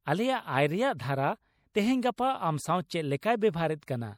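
Throughout, the speech has a plainly audible watery, swirly quality, with nothing above 19.7 kHz. This is likely MP3 compression at a low bitrate, around 64 kbps, where the encoder zeroes weak frequency lines that flicker on and off between frames and cuts the treble at a fixed point.

At 1.73 s, 2.16 s and 3.21 s, a brief hiss of about 17 to 18 ms runs just ahead of a sharp onset, softening it. This is pre-echo: quantisation noise spread across a whole transform block leaks into the quiet moment before the attack.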